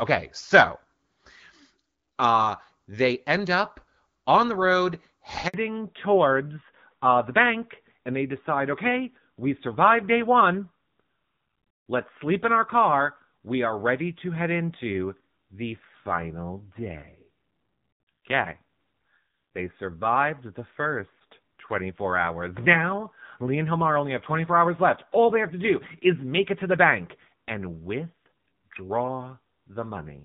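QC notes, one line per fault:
5.48–5.54 s, handover gap: right after "up on the road" the sound collapses within a few tens of milliseconds and stays silent for 60 ms. The call was handed from one network to another and no speech frames were delivered while the link switched over, so the decoder had nothing to play. Whatever was said in that window is lost outright rather than smeared or concealed.
5.54 s to end, fallback to narrowband: once audio returns after "up on the road", nothing above 4 kHz remains for the rest of the clip. Before the gap the HD Voice path carried energy up toward 7 kHz with only light coding damage, consistent with AMR-WB around 12.65 kbit/s. Afterwards the band-limit and a duller, rougher texture point to an AMR-NB mode near 7.4 kbit/s. Sibilance and airiness are dulled, and the coarser excitation coding adds grit.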